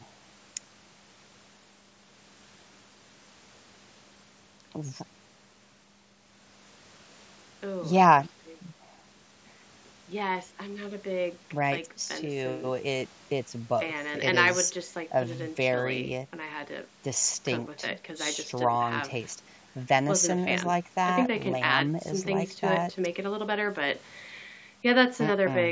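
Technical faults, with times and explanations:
No technical faults are heard in this speech clip.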